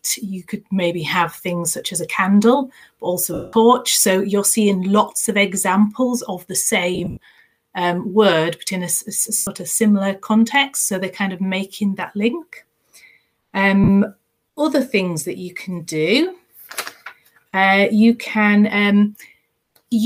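The audio has four dropouts from lost LE Audio frames. They fall at 3.34–3.53 s, 6.95–7.37 s, 9.37–9.47 s and 13.84–13.89 s. Their lengths are 190 ms, 200 ms, 100 ms and 40 ms, which fits 10 ms frames. The gap near 7 s is broken into scattered pieces over 420 ms, none longer than about 70 ms. In each gap the decoder repeats the last spectrum with scrambled phase, so the sound smears into noise, fading away over the longer losses. The light lossy compression is barely audible.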